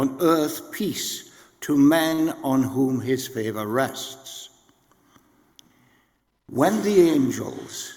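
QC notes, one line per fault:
2.09–2.14 s, short stall from a late packet: a packet arrived late and the jitter buffer ran empty, so the receiver held the last sound for 25 ms and then resumed at the same point. Nothing is lost, but playback shifts 25 ms later and that sound lingers slightly too long.
2.14–2.20 s, short concealed packet loss: immediately after the stall, 40 ms of audio never reached the decoder in time. The receiver bridged the gap by extending the preceding sound and then blended back into the real signal. This is heard as a brief smear, and the original 40 ms is gone.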